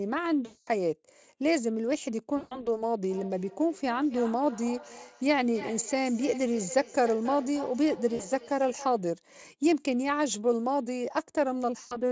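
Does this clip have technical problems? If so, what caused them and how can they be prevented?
Yes. VoIP packet loss concealed by the speech codec: packets went missing, and the decoder extrapolated from its last pitch and filter at 0.45–0.69, 2.37–2.81, 8.15–8.25 and 11.79–12.00 s. The sound smears into a buzzy tone or coloured noise that fades before recovering. A wired or stronger network connection with a properly sized jitter buffer prevents this.

Feedback echo between two devices: from 3.07 to 9.12 s, a second device in the room replays the call and its microphone sends it back. Thinning repeats arrive roughly every 0.3 s, at about 15 dB below the speech. Muting one device or using headphones prevents this.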